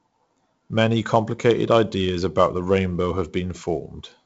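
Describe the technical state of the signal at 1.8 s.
At 1.8 s the speech passes through heavy 4-bit ADPCM compression, which runs for the whole clip. Coarse predicted steps add gritty hiss that tracks loudness, and nothing above 7.7 kHz survives, which fits a 64 kbps stream.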